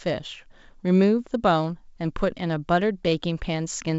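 Nothing stood out on listening to this speech, which comes through G.722 wideband telephone coding with its content reaching to about 7.7 kHz and the coding's own marks at most faint.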